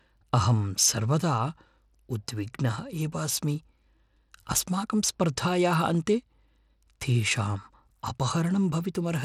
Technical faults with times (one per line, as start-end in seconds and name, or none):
0.00-9.25 Bluetooth SBC compression